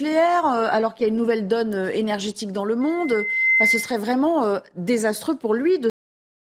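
Speech, interrupted between 2.81 and 4.01 s by a loudspeaker feedback squeal: a microphone is hearing its own loudspeaker, and the loop gain tips past unity at 2.1 kHz, so a pure tone swells over roughly three-quarters of a second to sit a few dB above the voice. On a spectrogram it is a single bright horizontal line that thickens as it grows. The recording then has a cut-off end at 5.90 s, where the final buffers never made it out. The waveform drops straight to flat silence mid-sound with no decay, and the spectrogram shows a clean vertical edge into silence.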